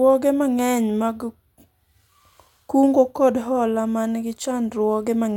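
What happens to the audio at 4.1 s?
Nothing goes wrong at 4.1 s: the speech carries on intact through that moment, with no dropout, click, distortion or other fault to be heard.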